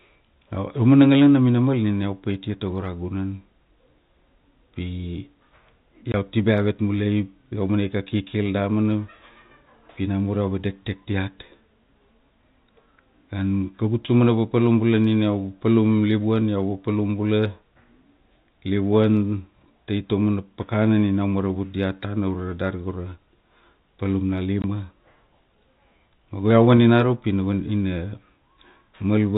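Packet loss filled with silence interrupts this speech clip twice, at 6.12 to 6.14 s and at 24.62 to 24.64 s. Each time audio went missing in transit and the receiver played a 20 ms gap of silence instead, which fits a single lost packet. The abrupt cut and restart leave a short hole with hard edges. The narrow telephone band of the G.711 coding carries the rest of the sound.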